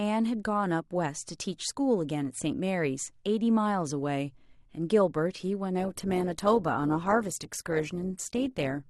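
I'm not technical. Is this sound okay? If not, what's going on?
No. From about 5.79 s to the end, this is an adaptive stream at a lower bitrate. The speech comes through a streaming service that adjusts quality to the connection. When the connection slowed, it switched to a more heavily squeezed version of the same audio. You'll hear the voice suddenly turn rougher, with more digital artefacts, and there's no gap or pause at the switch.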